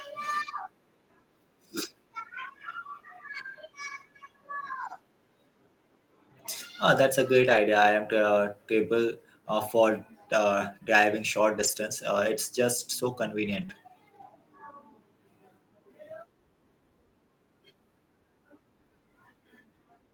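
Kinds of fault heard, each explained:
Lost packet rebuilt from error correction: Speech was lost in transit, but a later packet carried a low-bitrate copy, and the decoder played that copy instead. There is no gap, just brief rough, noisy stretches of 20 to 100 ms at 4.67, 7.41, 11.59, 13.45 and 13.70 s.
Short concealed packet loss: About 20 ms of speech never arrived in time. The receiver filled the hole by extending the preceding sound, then blended back into the real signal. It is heard as a brief smear from 13.65 to 13.70 s, between two rebuilt stretches.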